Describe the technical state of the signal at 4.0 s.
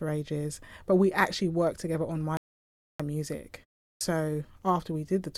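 At 4.0 s the signal shows a clipped start after a pause. During the roughly 0.37 s silence following "together on my music", the output device dropped into a low-power or unlocked state and took time to come back. Between 3.94 and 4.01 s about 73 ms of sound is swallowed, so the next word begins abruptly out of silence, its opening consonant or onset cut away rather than building up naturally.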